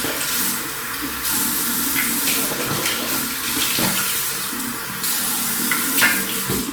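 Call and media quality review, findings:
Call bitrate drop from 3.83 s, running to the end of the clip. Sound goes coarse and watery and loses its top end, muffled at its worst for about 1.7 s. Probable component: Opus encoder following a lowered bandwidth estimate. Sounds like a fall from around 48 kbps to about 18 kbps, so it's coding with far fewer bits and trimming the highs. No recovery before the clip stops.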